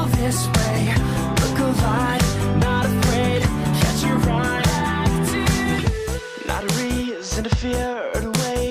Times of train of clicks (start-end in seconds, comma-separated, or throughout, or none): none